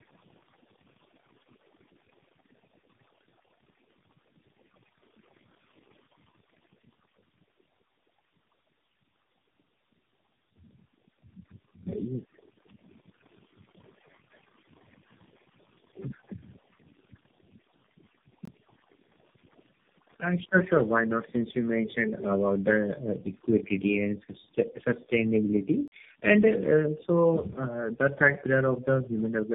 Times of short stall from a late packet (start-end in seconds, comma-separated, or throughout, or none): none